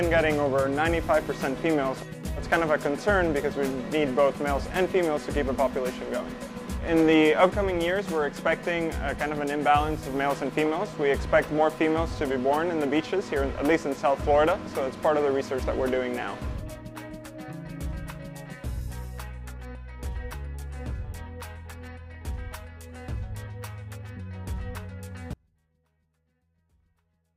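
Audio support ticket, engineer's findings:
Audio dropout to a faint residue from 25.34 s to end. Signal cuts abruptly, leaving faint sound roughly 35 dB down. Likely upstream signal loss with downstream path still live.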